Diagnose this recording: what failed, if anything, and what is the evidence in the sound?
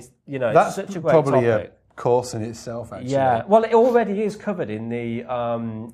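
A slowed network pushed the adaptive stream to a lower bitrate at 1.70 s. Quality abruptly changes and artefacts rise with no gap, fitting an MP3 drop from 128 to 63 kbit/s.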